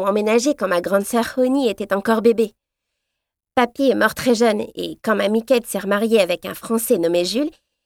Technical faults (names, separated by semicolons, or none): none